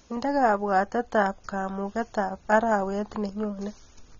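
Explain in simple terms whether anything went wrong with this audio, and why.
The speech sounds dull and muffled throughout, with nothing above 7.5 kHz, likely from heavy AAC compression discarding the high frequencies to save space.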